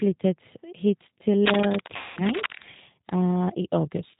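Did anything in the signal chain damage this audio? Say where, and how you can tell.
Yes, three things, at three different stages.

The codec stage left its mark across the whole clip. Nothing gets through above 4 kHz, and the speech has that slightly rough, synthetic edge you get when it's rebuilt from a vocal tract filter, a pitch predictor and a handful of pulses per frame. That's the G.729 codec at work, and the damage is plainly audible. The sound fits a G.729A encode at 8 kbit/s.

In the analogue wiring, there's cable scratch noise from 1.46 to 2.64 s: dense, uneven bursts of scratchy rustle sitting right on top of the speech at about the same level. That crackly, irregular texture is what you hear when contact resistance jumps around. The likely cause is a worn cable, connector or control being moved during the take.

On the network side, there's VoIP packet loss concealed by the speech codec from 1.96 to 2.20 s. 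About 210 ms of audio never arrived. The decoder filled the gap by stretching its last pitch and filter state into a buzzy tone or a coloured noise that fades. Because each frame builds on the one before it, the speech stays weak and a bit smeared for a short while after the packets resume, so the recovery isn't instant.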